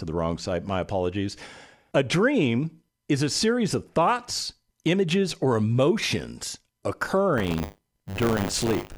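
From 7.37 s to the end, buffer tearing causes a robotic 100 Hz buzz. Each period splices in a sliver of audio about 40 ms old.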